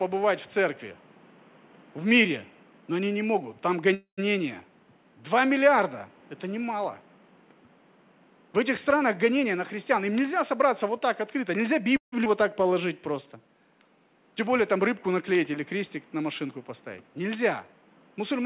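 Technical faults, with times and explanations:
3.94–4.33 s and 11.97–12.14 s, call audio freeze: Right after "они не могут там" the sound stalls. The last sound trails on as a fading buzz and then drops out, with about 120 ms of near-silence inside a 235 ms fill. At 11.97 s, just before "вот так", the same happens over 157 ms, about 130 ms of it silent. The likely cause is packets held up in transit, which left the jitter buffer empty. The receiver extended the last sound until the packets arrived, then resumed where it had stopped, so nothing is lost but the delay grows by that much each time.
9.01–11.88 s, jitter buffer speed-up: The sound runs at about 107% of normal speed with unchanged pitch and feels slightly hurried. The buffer was holding more audio than its target, so the receiver trimmed many short pitch-period-sized slices in a row. Roughly a fifth of a second is removed in total, which brings the delay back down without any audible pitch shift.
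12.24–12.27 s, skip ahead: Just before "вот так", playback jumps forward. An 11 ms join bridges a loss of roughly 70 ms, so part of a sound is simply absent and the two sides meet almost directly. A stretch of audio was discarded while later audio was already waiting in the buffer, which cuts the delay by about that amount.
12.64–13.43 s, jitter buffer slow-down: The sound is drawn out to about 92% speed at the same pitch, with a slightly stretched quality. The buffer was running low or had just raised its target delay, so the receiver repeated single pitch periods and bits of pause to rebuild a reserve. About 68 ms is added over this stretch.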